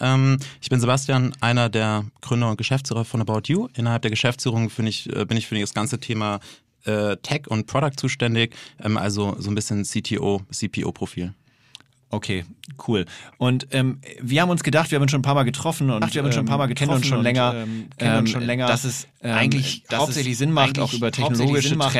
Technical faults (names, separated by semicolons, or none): doubled audio track